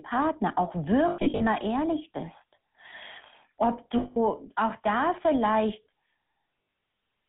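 Speech with a buzzy, gravelly roughness throughout, squeezed into a narrow band of about 150 Hz to 3.5 kHz, the mark of the GSM full-rate codec, whose pulse-driven vocal-tract model fits 13 kbps. At 1.08 to 1.42 s, 3.98 to 4.17 s and 6.62 to 6.82 s, sound smears into a rough metallic ring: lost GSM frames, concealed by repeating the last good frame at falling level. The first and last are scattered dropouts, each run no longer than about a tenth of a second.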